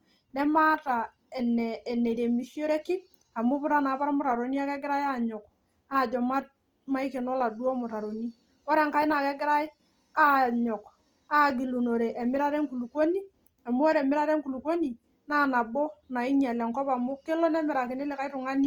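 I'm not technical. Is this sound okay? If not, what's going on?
No, it isn't clean. Opus compression damage runs through the whole recording, from start to finish. The speech has a rough, grainy texture, with a hiss-like fizz clinging to the sounds instead of a smooth, natural tone. That is most likely because the audio was squeezed hard to save space: when the encoder runs short of detail, it fills gaps with borrowed or noisy material, and that substitute is what makes it sound gritty.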